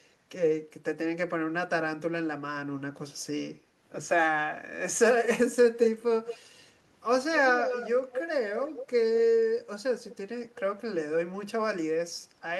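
Echo leak appears in the speech at 6.26–6.38, 7.36–7.89, 8.11–8.27, 8.59–8.86, 10.11–10.16 and 10.54–10.6 s: a delayed copy trailing the speech by about 200 ms, strongest around 7.4–8.3 s and fading to a faint ghost near 10 s. The likely cause is a far-end echo canceller leaving residue. A spectrogram shows duplicate harmonic bands offset by 0.2 s; the waveform shows low smeared tails after syllables.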